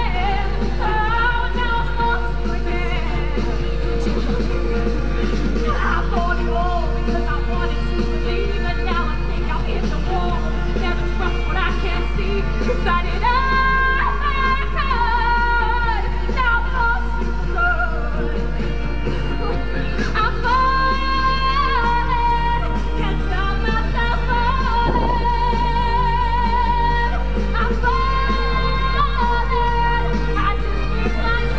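From the first moment to the end there's a steady mains hum at 50 Hz, about as loud as the sound itself. Something like a ground loop or a nearby transformer is leaking the power line into the signal, so you hear a constant low drone with a few low harmonics sitting on top.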